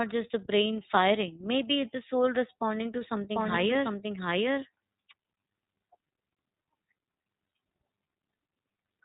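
From start to finish the speech has passed through the iLBC codec. Each 30 ms frame's excitation is coded on its own, which fits iLBC's 13.33 kbps mode. The codec keeps nothing above 4 kHz, so the sound is muffled and narrowband. The coding damage is plainly audible as a rough, slightly synthetic grain on the speech, with the hard edge of a low-rate voice coder.

Just after "the soul responding to", from 3.35 s to 5.13 s, a doubled audio track appears. The likely cause is the same signal being captured a second time through a slower path and mixed back in. The copy trails by roughly 0.7 s at about the same level as the original. It carries no decay or room colour, so it sounds like a second overlapping take rather than an echo. It cuts in and out abruptly at both ends.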